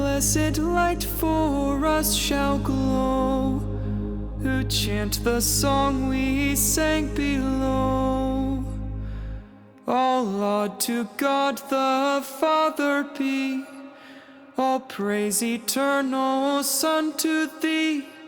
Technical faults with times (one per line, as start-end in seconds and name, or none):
none